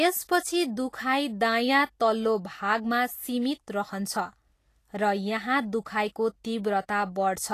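From start to finish the speech carries a hiss and graininess in the upper range, with sibilants and consonant onsets sounding smeared and rough. The likely cause is Vorbis compression at a low setting, consistent with roughly 34 kbps. The treble residue is quantised so coarsely that detail turns into noise-like texture, and a spectrogram would show nothing above 14.1 kHz, with patchy, speckled energy below that edge instead of clean harmonic detail.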